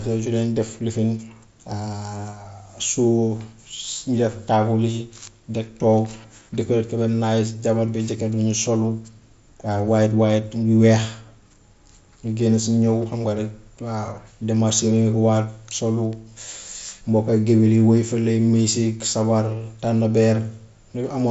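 Nothing faulty here: the speech tops out near 7.7 kHz, which is the expected ceiling of the Bluetooth mSBC headset codec carrying it.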